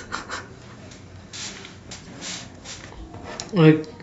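A short speech clip with damaged data in a compressed stream at 2.03 to 2.07 s: corrupted frames make the decoder lose sync, producing a brief glitch.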